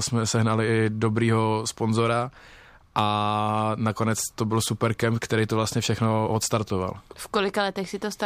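No technical faults can be heard in this recording.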